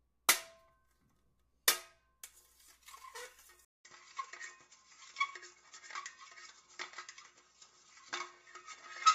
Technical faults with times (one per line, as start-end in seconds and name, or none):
3.65-9.15 input switched to a poorer device